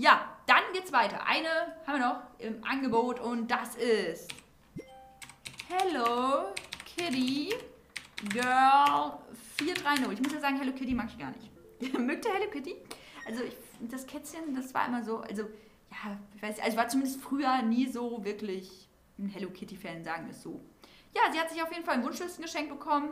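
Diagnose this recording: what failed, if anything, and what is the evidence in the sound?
Nothing in this recording points to a failure at any stage of the chain. No audible event in the sound ties to a particular time or mechanism, so there is nothing here to diagnose.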